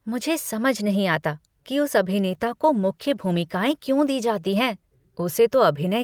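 After "नहीं आता कि उस", from 2.22 to 5.97 s, a call bitrate drop makes the speech rough and watery, which fits coarser coding at around 21 kbps instead of 64 kbps. The spectrogram looks grainier and smeared.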